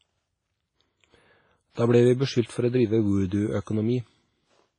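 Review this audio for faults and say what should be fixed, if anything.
Throughout the speech there is a ringing, washy quality, with a hiss that swells and fades along with the signal and no content above about 10.4 kHz. This is heavy transform-codec damage, likely from WMA compression: long blocks smear quantisation noise over tens of milliseconds, and the hard bandwidth limit and zeroed weak detail point to a low bitrate, around 24 kbps. To prevent it, re-encode from the original source at a higher bitrate or with a modern codec.

From 3.61 to 3.67 s, a short hiss arrives just ahead of a sharp onset, and the attack itself sounds blunted and smeared. This is pre-echo, spread over about 57 ms. The attack fell late within a transform block, so noise sized for the loud part was spread evenly across the block and filled the quiet stretch before it. To prevent it, use an encoder that switches to short blocks on transients.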